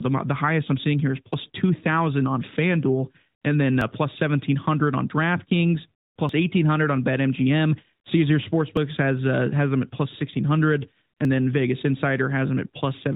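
At 1.34, 3.81 (between "and then" and "plus seventeen hundred on"), 6.29 (just before "eighteen hundred on"), 8.77 and 11.25 s (after "at plus sixteen hundred"), tiny skips of about 20 ms recur every 2.5 s. This is likely audio missing between chunks: the ends are butted together with no silence gap, unlike a dropout. The speech is also narrowband, with nothing above about 3.8 kHz.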